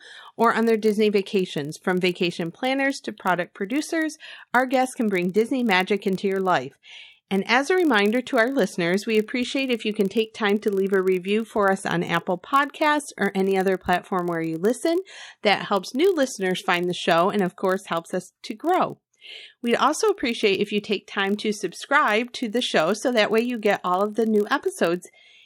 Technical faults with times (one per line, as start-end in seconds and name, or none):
0.00-25.45 block size mismatch (padded)